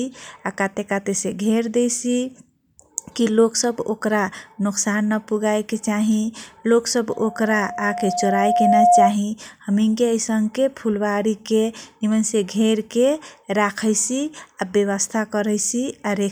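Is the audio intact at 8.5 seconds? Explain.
No, 8.5 s lands in a loudspeaker feedback squeal from 7.09 to 9.16 s. The mic-speaker loop runs away at 711 Hz, swelling over roughly two seconds to sit about 10 dB above the speech.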